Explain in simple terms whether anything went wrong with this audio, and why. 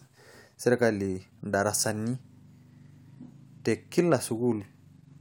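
Nothing went wrong here: the speech comes through without a single glitch, dropout or odd noise along the way.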